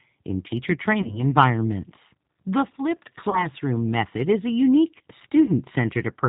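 Speech runs through a G.729 codec, and its damage is plainly audible: at a rate consistent with 8 kbit/s, the voice is rebuilt from a filter, a pitch predictor and a few pulses per frame, so it sounds rough and synthetic and has no content above 4 kHz. VoIP packet loss concealed by the speech codec occurs at 1.02–1.21 s, 3.30–3.48 s and 5.45–5.52 s. Each gap fits a single lost 30 ms packet. The decoder fills the gap by extending its last pitch and filter at falling gain, which produces a brief buzzy or noisy, fading smear. Because each frame depends on the one before it, the voice stays weakened or distorted for tens of milliseconds afterwards.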